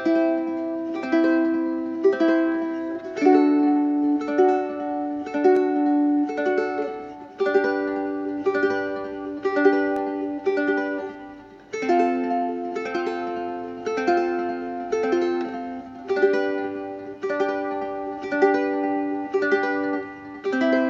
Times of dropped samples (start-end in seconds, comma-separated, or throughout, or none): 5.57, 9.96, 13.08